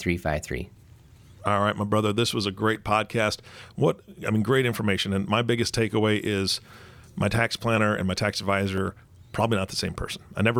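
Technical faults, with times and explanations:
0.75–9.78 s, clock drift buffer slips: a regular click recurs about once per second through the speech, around ten in all, each a small block of roughly 30 samples dropped or repeated, likely from two devices' clocks disagreeing by several hundred ppm.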